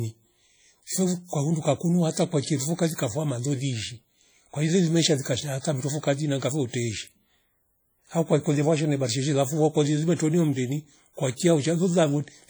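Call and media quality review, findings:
Speech, whole clip: heavy ringing, washy smear, hiss pumping with level. Likely WMA compression near 32 kbps: long transform blocks smear quantisation noise over tens of ms; weak components dropped.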